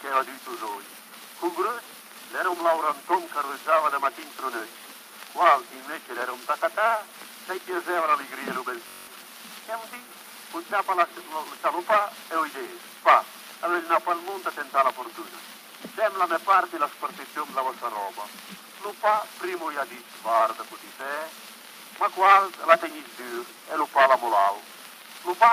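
From 8.88 to 9.08 s there is a Bluetooth stutter. Packets arrived late or not at all, so the receiver kept replaying its last short buffer, giving a rapid buzzing repeat. About 192 ms of sound is lost, consistent with roughly nine missing packets, and playback resumes further along.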